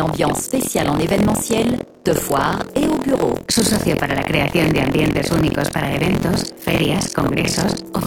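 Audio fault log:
Throughout: buffer tearing. A steady robotic buzz at about 43.1 Hz rides on the sound whenever signal is present. Writer and hardware reader have slipped, so about a fifth of each period replays audio from roughly 70 ms earlier, with hard joins, which fits a 1024-sample buffer.
6.77–6.94 s: loud pop. Two sharp pops in quick succession stand a few decibels above the sound, which carries on underneath. A sudden voltage step, likely from a plug, switch, static discharge or driver glitch, was added to the signal and shaped by the following circuitry.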